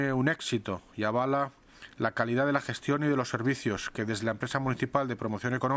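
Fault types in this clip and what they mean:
Nothing to flag here, since no technical faults turn up anywhere in the audio.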